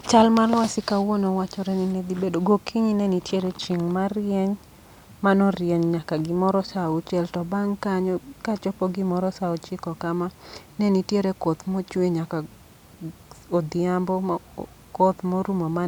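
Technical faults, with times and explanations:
No technical faults can be heard; the speech signal stays continuous and steady in level throughout.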